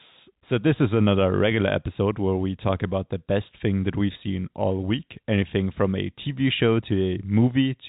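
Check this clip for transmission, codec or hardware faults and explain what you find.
No faults found in the speech; content stops at 4 kHz, which fits a narrowband call path such as G.711 mu-law at 64 kbps.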